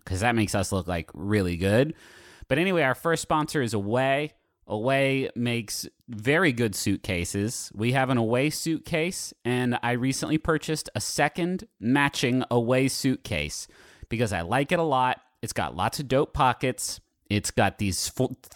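No technical faults are audible.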